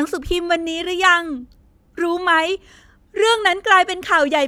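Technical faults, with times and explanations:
No technical faults can be heard anywhere in the recording. There is nothing to list with a time or an explanation.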